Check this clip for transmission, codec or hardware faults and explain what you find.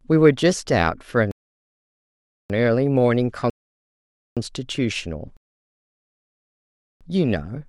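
Two faults are present: sample clock jitter across the whole speech clip, and three rebuffering stalls.

Sample clock jitter runs throughout. The converter's timing wanders by roughly 0.7 microseconds, so each sample lands slightly off time. The error tracks waveform slope, producing a faint hiss around 50 dB below the speech that swells on loud, bright syllables. On a spectrogram it appears as a thin broadband haze riding on voiced energy.

Rebuffering stalls occur at 1.31–2.50 s, 3.50–4.37 s and 5.37–7.01 s, adding about 1.19 s, 0.87 s and 1.64 s. The player exhausted its downloaded audio and paused until more arrived. Speech drops to dead silence, then resumes exactly where it stopped. Waveform and spectrogram show flat empty gaps.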